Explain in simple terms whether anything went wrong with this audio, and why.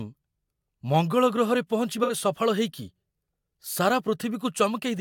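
AAC frame loss with concealment occurs at about 2.03 to 2.13 s in this speech, just after "ମଙ୍ଗଳ ଗ୍ରହରେ". About 64 ms of audio went missing, which points to roughly three lost AAC frames. Instead of leaving silence, the decoder guessed at the missing piece by reusing the sound from just before the gap. Because that guess is only an imitation, this short stretch sounds smeared and noisy, not clean.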